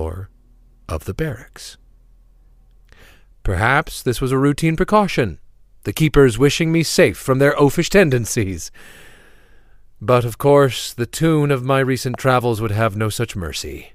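Right after "the tune of my", at about 12.14 to 12.16 s, there's a loud pop: a single sharp click-thump that jumps roughly 5 dB above the speech, and the talking carries straight on underneath it into "travels would". It's likely an electrical transient, a voltage spike from something like a plug, a switch or static, hitting the signal chain. The downstream circuitry rounds the spike into that brief pop rather than leaving a clean edge.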